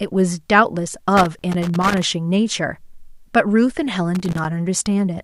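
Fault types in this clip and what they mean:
Loose connector crackle, 1.17 to 2.02 s and 4.15 to 4.45 s: a worn contact intermittently breaking, chopping the speech into irregular bursts of scratchy crackle.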